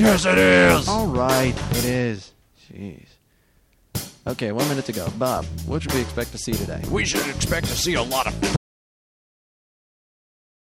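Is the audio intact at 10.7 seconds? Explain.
No. An audio dropout to silence runs from 8.56 s to the end, likely a lost input written as silence; unlike a fade or gate, it leaves no room tone at all.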